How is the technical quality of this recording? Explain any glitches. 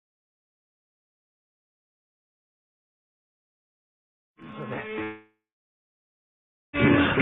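The recording has one clear glitch, a long network dropout from 5.03 s to 6.75 s. At 5.03 s the sound gives way to a fading buzz or hiss continuing the last sound, and then, for roughly 1.4 s, silence. The likely cause is a break in the incoming stream: the receiver briefly extended what it last had, then had nothing to play. About 1.7 s of audio is lost, and the sound resumes at 6.75 s without it.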